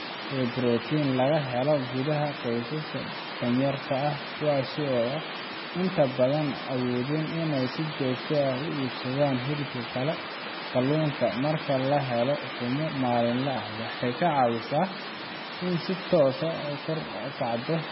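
The clip is speech, and the whole of it carries heavy damage of the kind left by MP3 compression. Nothing sounds above about 5.5 kHz, so sibilants are dull and clipped at the top. The remaining band is watery and swirly, with metallic chirping on s sounds and smeared consonant attacks, as weak frequency lines drop in and out from frame to frame. The likely cause is an encoder starved of bits, which fits a rate near 16 kbps.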